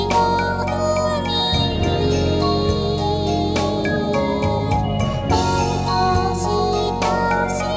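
Nothing technically wrong turns up anywhere in this one; the audio just runs along without any glitches or problems worth pointing out.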